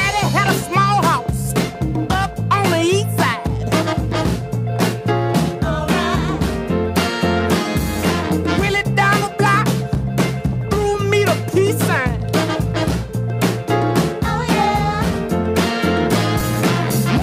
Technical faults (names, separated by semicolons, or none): dropped buffer (overrun)